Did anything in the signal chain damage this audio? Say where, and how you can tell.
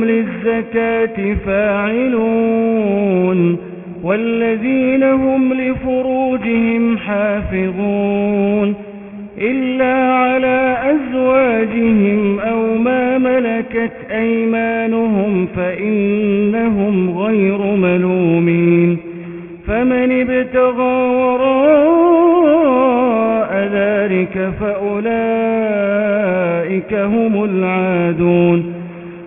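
Yes. Throughout the clip, high-frequency detail sounds gritty and metallic, with tones at wrong, unrelated pitches sitting under the sound, and the spectrum runs hard up to an edge at 3 kHz. That is aliasing from sample-rate conversion, consistent with a drop to a 6 kHz rate done without a proper anti-alias filter. Everything above 3 kHz folded back below it instead of being removed, leaving the folded energy at roughly 15 dB under the signal.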